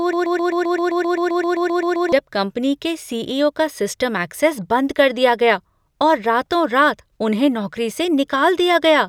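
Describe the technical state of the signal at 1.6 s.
At 1.6 s the signal is inside a broken-record loop, likely from a player or stream stall resending its last held fragment. Already running at the start, it repeats one 0.13 s slice of speech back to back until 2.12 s, replacing the lost audio.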